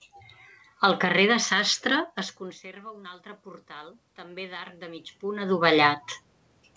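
Speech over a call, with the band ending at 8 kHz, which fits a wideband codec such as G.722. Around 2 s the talker seems to move away, and the level drops by about 21 dB. From 2.82 to 5.55 s there is automatic gain rising. The gain control hears the quieter input and slowly raises its gain by about 9 dB. Voice and room noise swell up together. The input drop is far larger than the gain, so the gain wins back only part of the lost level.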